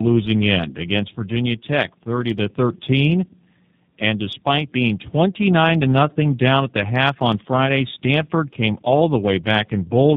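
Tandem speech coding runs throughout the clip: the speech appears to have passed through two low-rate speech coders in sequence, which fits iLBC followed by G.729A. The second coder re-encoded the first one's already degraded output, leaving the speech rougher, noisier, muffled and warbly, with nothing above 3.8 kHz.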